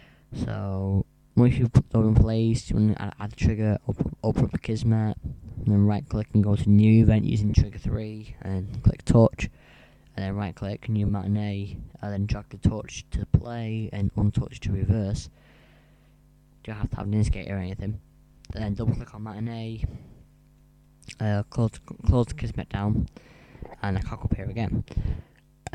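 Lost LE Audio frames cause brief noisy smears at 5.61, 7.50, 11.06, 14.20 and 18.97 s, lasting 20 to 40 ms each. The decoder refills each gap with scrambled copies of the last spectrum.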